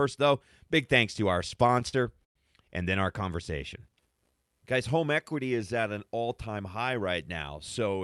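From 1.39 to 2.37 s, right after "big thanks to our", repeated stalls (stutter) occur. The jitter buffer ran dry ten times and each gap, up to 109 ms, was filled by stretching the last sound. The result is choppy dragging rather than a smooth slowing.

From 3.52 to 4.57 s, after "and then our", a jitter buffer slow-down repeats single pitch periods, adding 147 ms. The speech plays at 87% speed with unchanged pitch, evenly drawn out rather than stopping and starting.

From 6.50 s to 8.01 s, after "is at an all", a jitter buffer speed-up trims pitch periods, removing about 150 ms. The speech runs at 107% speed and sounds hurried but keeps its pitch, unlike a simple faster playback.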